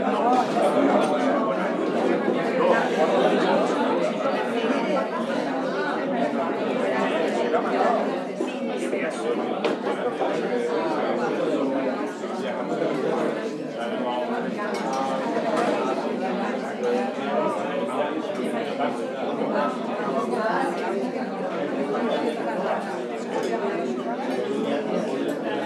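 No technical faults can be heard anywhere in this clip.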